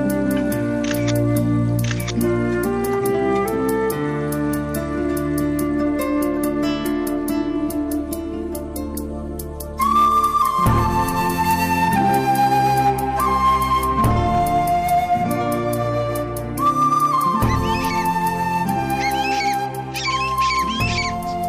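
Brief crackle rides the loudest peaks from start to finish, a light roughness rather than constant fuzz. This is hard clipping: the signal runs about 3 dB beyond what a stage can pass, so just under one percent of samples are sliced flat, spraying harmonics high up the spectrum.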